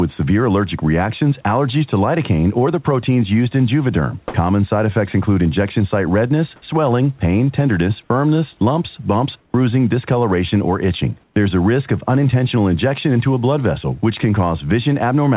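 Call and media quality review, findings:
Comfort noise in place of the background, 9.40–9.54 s (140 ms) and 11.24–11.36 s (120 ms). Real room hiss, about 40 dB under the talker, drops out and a flat, textureless hiss fills the gap: roughly level at the first spot, about 5 dB quieter at the second. Likely discontinuous transmission on the sender's VAD with receiver-side synthetic noise. Band tops out at 4 kHz, consistent with narrowband G.711.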